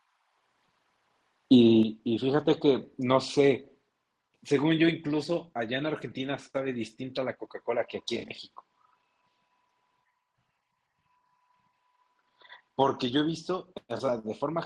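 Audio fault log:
1.83 s, microphone volume stepped down: voice and background both drop by about 6 dB in a single instant and stay at the new level. The likely cause is the call software cutting the device's input volume after finding the microphone too hot. A fade would take time, and a dropout or codec glitch would recover, but this is a clean, permanent step. The call codec's top end, near 12 kHz, is the same on both sides of the step.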